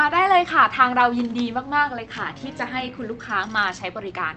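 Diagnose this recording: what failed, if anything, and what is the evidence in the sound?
Nothing in the recording points to a failure at any stage. The speech has passed through a WebRTC call path, heard as a top end that stops at about 8 kHz, which fits Opus in its wideband mode at around 32 kbps.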